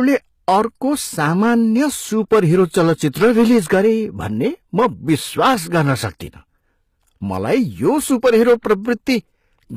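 Throughout the speech, hard clipping flattens the loudest peaks: the signal was driven about 8 dB past what a stage could pass, so a few percent of the waveform is cut square. That sounds like crackle riding on peaks rather than the smeared fuzz of soft saturation. Also across the whole clip, plainly audible codec damage makes s sounds gritty and metallic, with nothing above 14.9 kHz. The cause is likely HE-AAC compression at a low rate, around 20 kbps. Spectral band replication rebuilds the treble from copied lower bands, so it sounds present but misaligned rather than simply dulled, which sets it apart from a plain low-pass.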